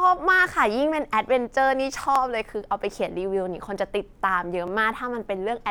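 Overlapping chunks at 2.16 s and 4.68 s in this speech clip: at each point a 20 ms slice of audio plays twice, heard as a brief stutter or click. The two joins are about 2.5 s apart, which points to the audio being handled in 2.5 s blocks where each new block begins 20 ms before the previous one finished, so the shared overlap is repeated instead of being blended or trimmed.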